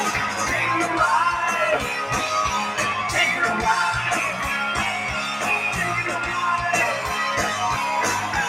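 A noise suppressor applied to music or sounds runs throughout the clip. Tuned for speech, it treats sustained tones, ambience and decaying tails as noise and pulls them down by around 5 dB, so onsets survive while held sound sinks, giving a pumping, thinned texture.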